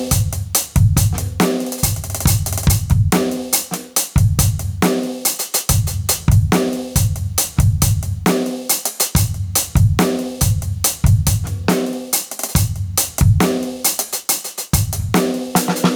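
A music recording with gain pumping throughout: loud and soft parts end up closer in level and the sound is squashed, with the level swinging by around 20 dB. The likely cause is input gain set far too high, with a fast limiter clamping every peak.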